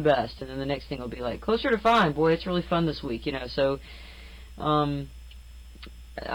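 At 0.39 to 0.41 s, a repeated buffer occurs: new audio failed to arrive in time, so the device replayed its last block four extra times. Each repeat is about 5 ms long, which fits a very small buffer, and the hard joins produce a brief buzzing click in place of roughly 20 ms of sound.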